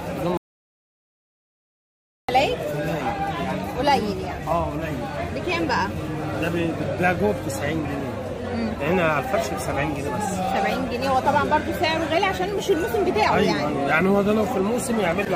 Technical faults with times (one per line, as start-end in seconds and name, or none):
0.37-2.29 audio dropout to silence